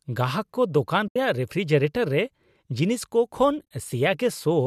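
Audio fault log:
1.08–1.16 s and 3.59–3.63 s, AAC frame loss with muting: about 80 ms of coded audio disappears each time, fitting roughly eight 10 ms frames, as from the likely low-delay AAC stream. The decoder zeroes the missing spectrum, so overlapping windows fade the sound into soft-edged gaps. The first gap is one solid hole. The second is scattered, with its longest run of silence around 30 ms.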